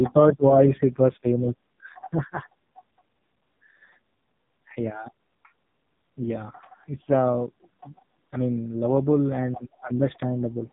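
From start to finish, the speech carries the marks of the AMR narrowband mobile codec. Nothing above about 3.8 kHz survives, so the sound is thin and boxed in. The codec rebuilds each 20 ms frame from a vocal-tract model excited by a few pulses. Here the damage is heavy. The voice sounds buzzy and synthetic. That degree of artefacting fits one of AMR-NB's lowest modes, around 5.15 kbps.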